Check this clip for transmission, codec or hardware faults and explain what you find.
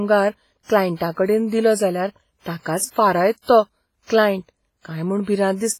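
Heavy WMA compression damage runs through the whole speech clip, likely from an encode at a low bitrate, which fits roughly 24 kbps. Long transform blocks spread quantisation noise over tens of milliseconds and zero weak components, so the speech rings and sounds washy, with hiss that breathes along with it.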